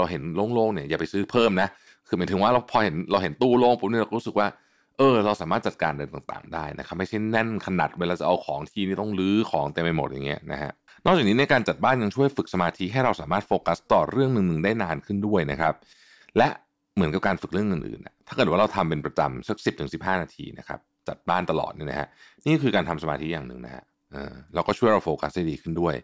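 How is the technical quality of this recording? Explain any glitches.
The technical quality of this recording holds up, with no glitches to explain.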